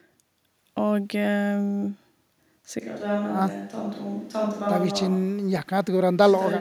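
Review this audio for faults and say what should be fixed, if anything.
From 2.83 s to the end, the sound turns abruptly roomy and hollow, loses bass, drops about 5 dB and gains faint room noise, likely a switch to a distant microphone. A plain gain drop would not add room tone. Monitoring the close microphone's feed and recording it on a backup track would prevent this.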